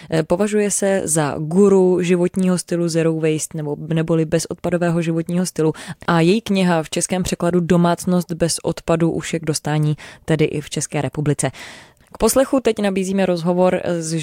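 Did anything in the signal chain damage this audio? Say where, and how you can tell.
No, nothing in the signal chain damaged this audio.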